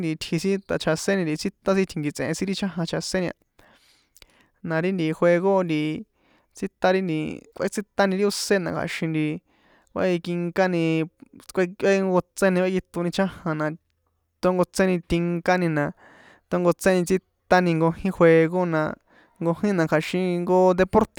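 No technical faults can be heard anywhere in this speech recording.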